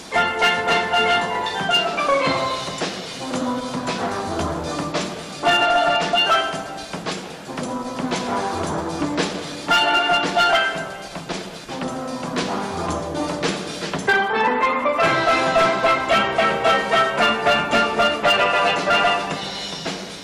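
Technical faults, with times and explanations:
Throughout, hard clipping: the signal's being pushed about 8 dB past what the chain can carry, so the loudest moments get their peaks sliced flat instead of rounding over. Only a small slice of the audio, something like 3 percent of it, actually hits the ceiling, but those squared-off tops throw harmonics way up the spectrum, which is why every loud spot comes with that hard, gritty crackle riding on top.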